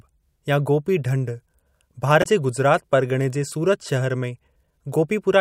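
A speech clip with one glitch: from about 2.20 to 2.26 s there's a short burst of damaged data in the compressed stream. Bad bytes tripped the decoder, which lost its footing for roughly 60 ms before locking back onto valid frames.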